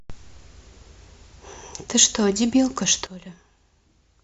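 At 3.07 s there's a sudden gain jump: the speech and the background noise drop together by about 14 dB in a single step and stay down to the end. It's likely a gain setting applied instantly rather than ramped in.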